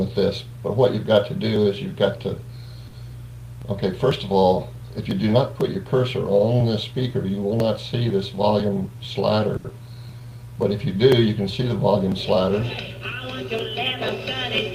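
At 2.87 s and again at 9.57 s, there is a short stall from a late packet. The jitter buffer ran dry. The last sound is held for 60 ms, then 80 ms, and then resumes where it left off. Nothing is lost. At 9.68 s, short concealed packet loss follows. About 40 ms never arrived, and 10 ms was filled by extending the preceding sound. This leaves a brief smear as playback catches up.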